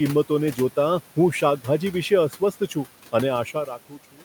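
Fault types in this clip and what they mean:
Noise suppressor artifacts: A noise suppressor works on the speech frame by frame throughout. It turns down each frequency band it judges to be steady noise. Here the cut is about 12 dB. The room noise, about 20 dB below the speech, drops away in the gaps and comes back up under the voice. The leftover noise can warble or flutter. The voice can take on a thin, watery edge.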